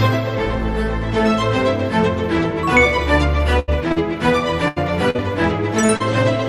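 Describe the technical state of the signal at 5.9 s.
Two short concealed packet losses fall around that point, from 5.86 to 5.91 s and from 5.97 to 6.02 s. In each, a slice of audio arrived too late for the decoder, about 20 ms and then 40 ms. The receiver papered over each gap by extending the preceding sound, for about 25 ms and 32 ms, before cross-fading back to real audio. The result is a quick smear or wobble, and a brief sound there may drop out.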